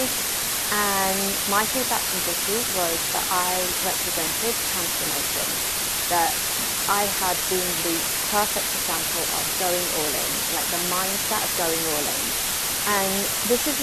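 From start to finish, a steady, even hiss sits close in level to the speech itself, never pumping or changing with the sound, and the speech carries no harsh or gritty distortion. This is low bit depth with dither. The signal is held at so few levels, which points to roughly a 3-bit quantiser, that rounding would normally distort it badly. Dither added before rounding turns that error into constant white noise instead.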